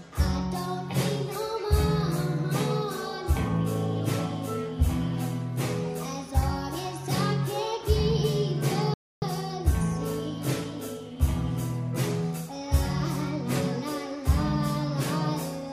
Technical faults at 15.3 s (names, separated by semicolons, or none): none